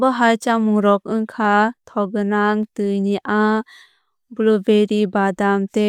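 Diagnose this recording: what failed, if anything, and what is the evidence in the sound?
Dropped samples, likely at the driver or buffer stage: single sharp clicks at 1.45 s, between "chamung rok" and "thokgwnang tui ni", and at 2.63 s, just before "tui ni". A tiny fraction of a millisecond vanishes, so the waveform jumps. Unlike a dropout, nothing audibly goes missing.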